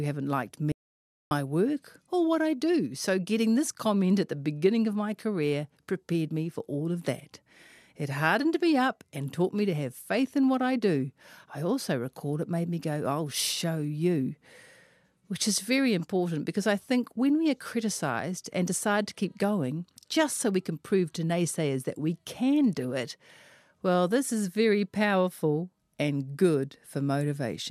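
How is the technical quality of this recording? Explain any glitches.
One glitch stands out near the start. From 0.72 to 1.31 s there is an audio dropout to silence: the speech cuts off mid-flow and about 0.59 s goes silent, most likely because the input signal was lost while recording continued. Unlike a natural pause or a noise gate, no room tone or fade remains, and the speech resumes abruptly.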